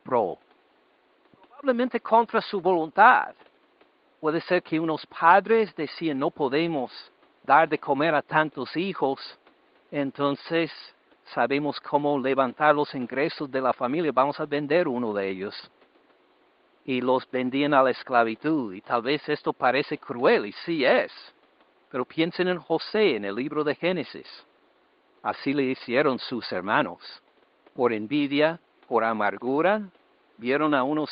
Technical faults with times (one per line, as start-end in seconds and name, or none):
none